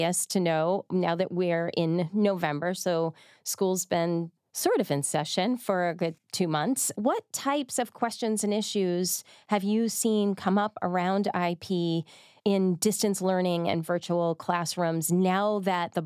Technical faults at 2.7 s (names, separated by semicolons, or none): none